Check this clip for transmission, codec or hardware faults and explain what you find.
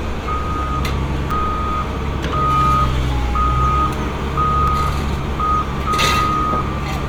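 Two brief blocks of digital silence interrupt the sound, at 1.31 s and 4.68 s. Each is a block of digital silence: a run of samples set to zero, most likely because the output buffer wasn't filled in time. The first gap lasts about 5.3 ms, which fits a 256-sample buffer, and the second about 1.3 ms, fitting a 64-sample block. With no fade in or out, each gap is heard as a tick.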